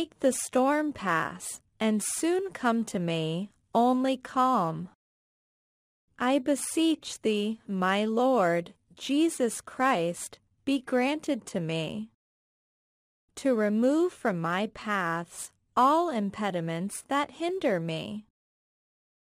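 Nothing in this speech recording stands out as a technical fault, so there's nothing here to pick apart.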